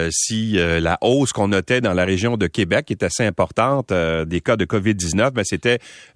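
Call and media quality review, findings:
No faults found in the speech signal; levels, continuity and timing hold steady throughout.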